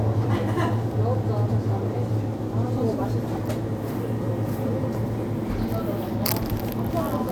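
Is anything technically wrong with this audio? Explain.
Yes. From 1.15 s to 7.1 s there are clock drift buffer slips, likely from two devices whose clocks differ by roughly 300 ppm. The buffer between them drifts until a small block of samples is dropped or repeated, producing a short click every 1.19 s, about seven in all.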